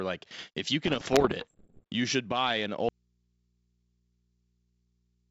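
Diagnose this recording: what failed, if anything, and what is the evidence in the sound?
Bit errors on the ADPCM link, codec stage. From 0.85 to 1.85 s, after "like if you", pops and rough bursts appear. Each flipped bit derails the decoder's step size, at roughly one and a half percent.

Audio dropout to a faint residue, from 2.89 s to the end, right after "you should buy an". Only hum remains, about 45 dB down. This is likely an analogue wiring break leaving an open input.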